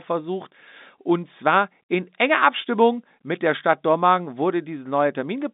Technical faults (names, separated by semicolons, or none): none